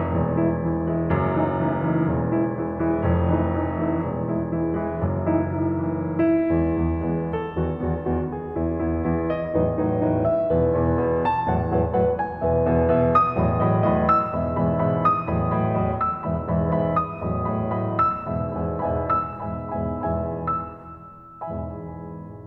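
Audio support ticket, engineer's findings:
No faults found in the music clip on review; nothing to action for this ticket.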